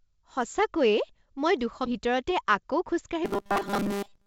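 At 1.86 s the speech lurches forward, with a join by 1.94 s. This is a skip ahead: about 0.4 s of audio was dropped while later audio was already queued, and the two sides are butted together with only about 12 ms bridging them.

From 3.25 s to the end, the speech turns into a rigid metallic buzz at 200 Hz that only loosely tracks the syllables, over the band-limited sound of the call path, which stops at 7 kHz. This is robotic sound from repeated short buffers, likely caused by late-arriving audio being padded by looping the last chunk, which fits a 5 ms buffer, with most of the real audio skipped.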